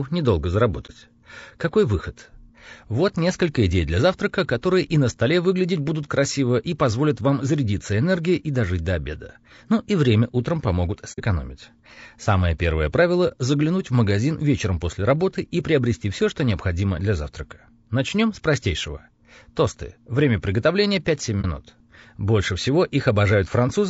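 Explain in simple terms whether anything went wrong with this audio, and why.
Something went wrong in two ways. The speech was squeezed hard by a compression scheme built for quick, low-delay sending, most likely low-delay AAC compression of the kind video calls use. To keep delay short, it cuts the sound into very small slices and can't describe each voice tone in much detail. Throughout the clip, the voice sounds rough and grainy, with a hiss filling the gaps between its tones and a thin, artificial top end.

The second problem is AAC frame loss with muting. A few chunks of the compressed stream never reached the decoder, and it filled each missing chunk with silence. The sound fades out and back in around each hole, so you hear brief soft dropouts. They occur at 0.86 s, at 11.12 to 11.20 s just after "и время утром помогут" (the longest, about 60 ms), at 13.28 s and at 21.41 s. Each of the other three lasts about 30 ms.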